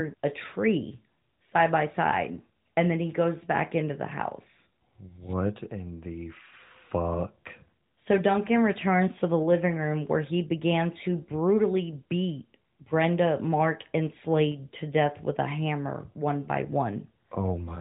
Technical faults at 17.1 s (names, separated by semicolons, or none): none